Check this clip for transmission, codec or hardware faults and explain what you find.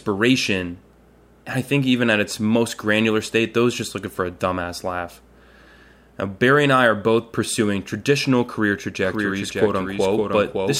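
A doubled audio track runs from 9.02 s to the end: a second full-band copy of the speech trails about half a second behind, roughly 5 dB quieter. It is likely from a slower capture path or misaligned edit, and it switches on abruptly without any room decay.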